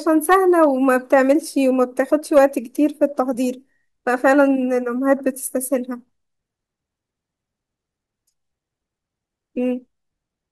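Hard clipping from 0.31 to 1.32 s and again from 2.36 to 2.39 s: the speech is overdriven by about 5 dB, then about 4 dB, so peaks are sheared flat, adding harsh, crackling upper harmonics.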